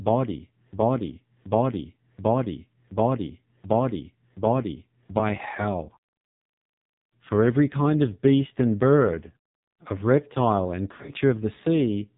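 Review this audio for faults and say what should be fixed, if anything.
Throughout, the AMR narrowband mobile codec leaves heavy buzzy, synthetic damage that points to a very low rate near 5.9 kbps. A spectrogram shows nothing above 4 kHz. Sending the call over a wideband path or at a higher AMR mode would prevent this.

From 0 to 5.2 s, a broken-record loop repeats a 0.73 s fragment six times, already under way at the start. It is likely a stalled player or stream. The waveform shows identical repeating blocks. Adding stall detection and buffer underrun recovery would stop the repeats.

From 10.92 to 11.11 s, just after "bird of reptile and", lost AMR speech frames scattered across 160 ms cause drawn-out, fading dips, the longest about 40 ms. The spectrogram shows brief smeared, weakening patches. Stronger radio error protection would prevent these losses.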